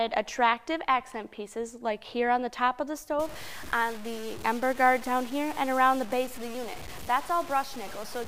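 From 3.20 s to the end, the sound turns grainy and rough, with a harsh distortion that rises and falls with the level and is only about 20 dB below the signal. Quiet passages sputter or drop out between coarse steps. This is likely low bit depth without dither: the values were truncated onto a coarse grid, which fits roughly 6 bits, so the rounding error tracks the signal instead of spreading as steady noise.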